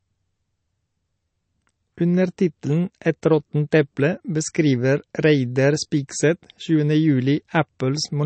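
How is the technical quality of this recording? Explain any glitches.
The recording is compromised by codec damage that runs through the whole speech clip, likely from MP3 compression at a low bitrate, which fits something around 36 kbps. Starved of bits, the encoder cuts everything above 8.3 kHz and drops weak frequency lines frame by frame, so the speech sounds dull and watery, with swirling, metallic chirps on s sounds and smeared consonant attacks.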